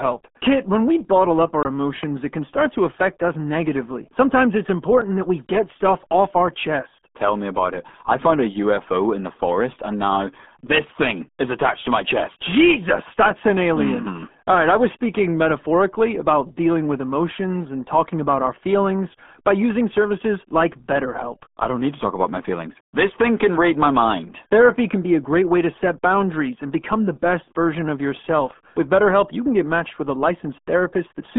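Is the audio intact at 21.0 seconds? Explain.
No. At 21.0 seconds, as everywhere else in the clip, the speech carries the RealAudio 14.4 codec's damage. The sound is squeezed into a telephone-like band of roughly 200 Hz to 3.5 kHz, and a spectrogram would show a hard, flat ceiling with nothing above about 3.8 kHz. Coarse low-rate coding, consistent with an 8 kbit/s stream, makes the speech muffled and gargly, with smeared, blotchy harmonics instead of clean formant bands.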